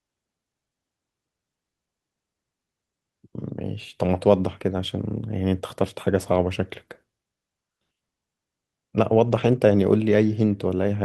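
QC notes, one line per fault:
9.27–9.57 s, lost packet rebuilt from error correction: the speech turns briefly rougher and noisier, with no gap or dropout. Packets were lost here, and the decoder played the low-bitrate copies carried in the following packets, rebuilding about 160 ms of audio at reduced quality.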